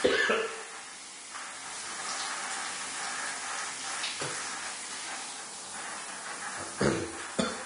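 From start to finish the audio carries plainly audible damage that points to Vorbis compression, likely at a low bitrate around 32 kbps. Nothing survives above 10.6 kHz, and the treble just below that has been quantised so coarsely that fine detail turns into hiss-like grain. Tones sound roughened and attacks smeared. On a spectrogram the energy stops at a flat ceiling near 10.6 kHz, with blotchy, noisy patches beneath it, while transients in the waveform look softened.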